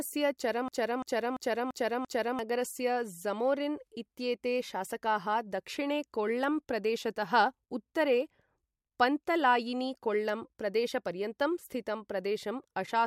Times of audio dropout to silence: none

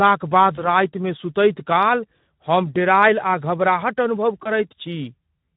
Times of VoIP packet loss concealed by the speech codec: 0.55-0.68, 4.44-4.49

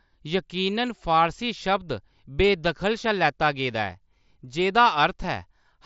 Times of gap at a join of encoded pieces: none

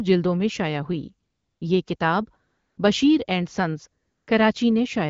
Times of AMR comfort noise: 1.29-1.61, 1.95-1.99, 2.49-2.77, 4.03-4.27

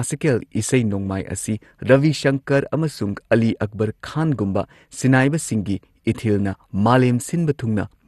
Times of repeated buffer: none

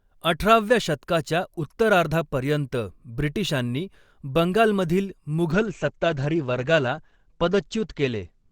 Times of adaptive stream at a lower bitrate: 5.52-8.52

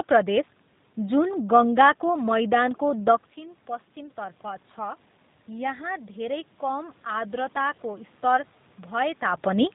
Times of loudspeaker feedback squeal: none

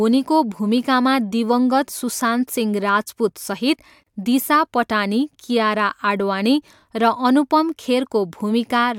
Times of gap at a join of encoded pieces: 4.03-4.07

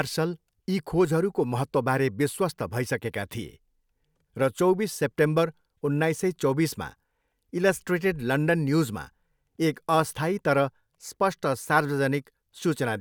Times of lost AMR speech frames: none

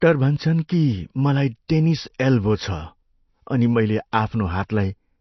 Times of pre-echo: 1.68, 2.18, 4.12

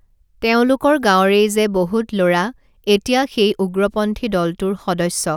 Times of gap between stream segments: none

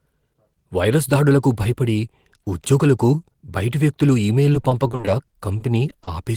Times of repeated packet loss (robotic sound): 4.53-6.09

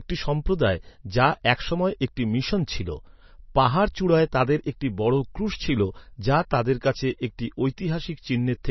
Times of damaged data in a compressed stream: none

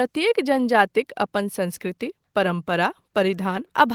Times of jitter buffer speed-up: none

